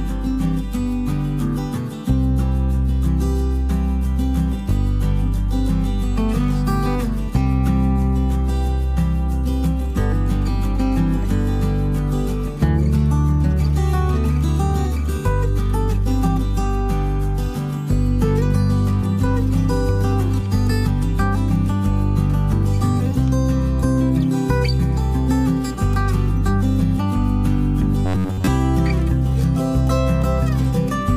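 From 28.06 to 28.50 s the sound goes robotic, with repeated short buffers: a rigid metallic buzz at about 94 Hz. That's likely audio arriving too slowly, so most of the stretch is roughly 11 ms snippets replayed over and over while the real material gets skipped.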